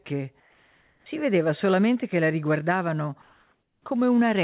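Speech with comfort noise in place of the background at 0.40–1.06 s, before "vedeva solamente che la", and 3.22–3.86 s, after "solamente che la riguardavano", likely from discontinuous transmission filling pauses with synthetic noise. The spectrogram shows smooth, featureless noise about 3 dB and 1 dB quieter, empty above 4 kHz like the call-codec audio.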